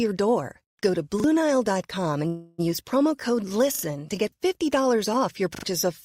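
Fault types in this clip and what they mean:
Call audio freeze: From 2.27 to 2.60 s the speech stalls and the last sound is stretched into a fading buzz or hiss for about 0.31 s. Nothing is cut. The speech resumes where it stopped, now running 309 ms later. The likely cause is delayed packets draining the jitter buffer.
Repeated buffer: At 3.75 s, after "promo code" and before "to get", and again at 5.55 s, a 40 ms slice plays twice more with hard joins. It is heard as a quick stutter. About 70 ms of following speech is lost each time.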